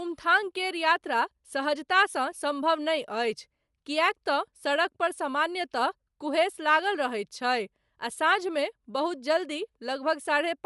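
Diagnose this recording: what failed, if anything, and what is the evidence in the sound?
The codec stage failed, likely through Bluetooth LC3 compression, throughout the speech. Nothing sounds above about 11.6 kHz, and the top band carries a breathy, grainy noise fill, which fits a 48 kbps stream in 10 ms frames. A plain low-pass filter would leave that band clean rather than noise-filled.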